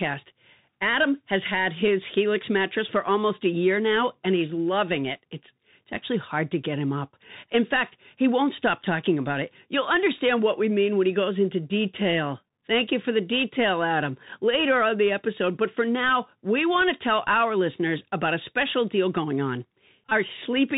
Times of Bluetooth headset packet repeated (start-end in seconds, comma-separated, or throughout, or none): 20.09-20.12